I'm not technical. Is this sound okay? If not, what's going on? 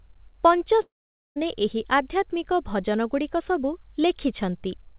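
No. What you're hearing is most likely a long network dropout: from 0.82 to 1.38 s no audio reached the listener. The receiver stretched the last sound into a fading buzz, then near-silence, and speech resumes with about half a second lost. The narrow, phone-like tone, with nothing above 4 kHz, comes from the call line.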